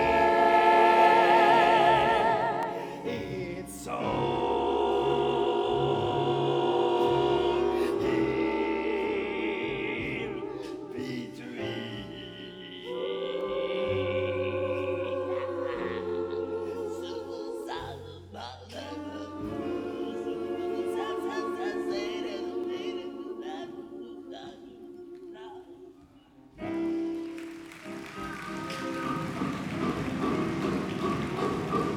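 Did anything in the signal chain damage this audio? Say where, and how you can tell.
Yes. Three sharp, isolated clicks at 2.63 s, 13.41 s and 22.64 s each show as a thin vertical line across the spectrum with nothing missing on either side. That's the signature of dropped samples, most likely at the driver or buffer stage. A tiny run of samples, a fraction of a millisecond each time, got skipped, so the waveform jumps straight to a later value. The gap is far too short to hear as lost sound; you only get the click from the discontinuity.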